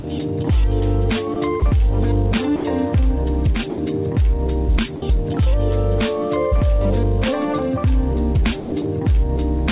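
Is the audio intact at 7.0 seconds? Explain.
Yes, the audio is intact at 7.0 seconds, with only the call path's usual narrowband character, nothing above 4 kHz, heard there.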